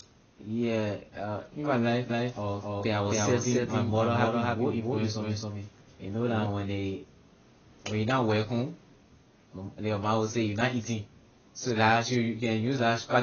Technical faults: AAC compression; doubled audio track

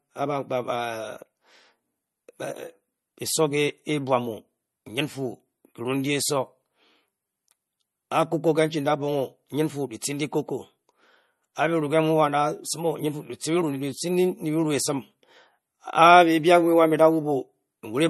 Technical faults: MP3 compression

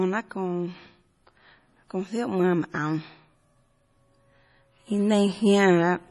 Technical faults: MP3 compression

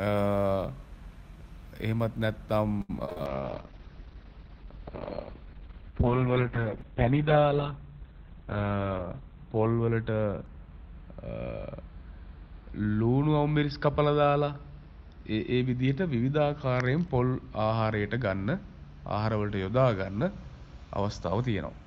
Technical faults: repeated packet loss (robotic sound); call bitrate drop; jitter buffer speed-up

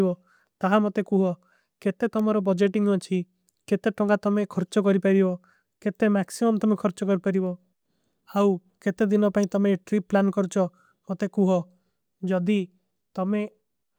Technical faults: electrical switching spike

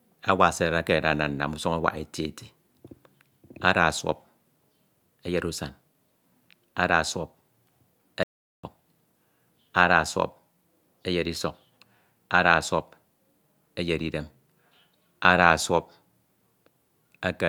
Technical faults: audio dropout to silence

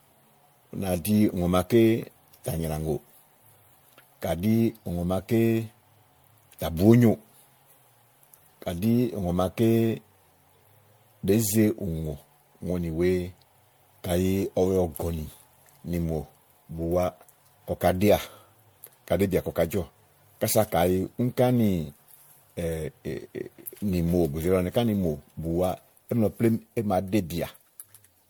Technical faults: generation loss

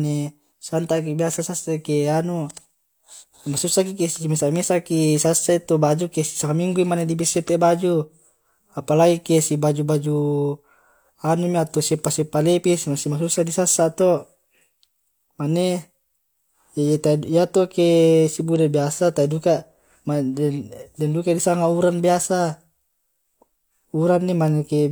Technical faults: damaged data in a compressed stream

